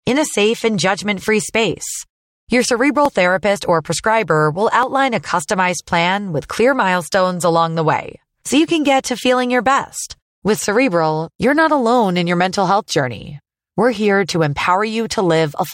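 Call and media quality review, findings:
Tiny forward jump in the speech at 3.06 s, just before "therapist or prescriber", and again at 4.83 s. No gap. Likely dropped buffer (overrun) in capture: about a millisecond or two of samples overwritten before being read, edges spliced directly.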